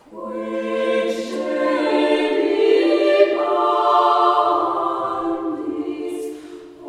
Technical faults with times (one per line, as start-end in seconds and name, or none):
none